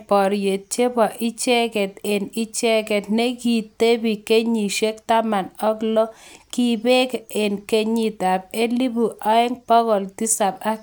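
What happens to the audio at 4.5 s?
Nothing goes wrong at 4.5 s; the speech continues there without any dropout, click, distortion or other fault.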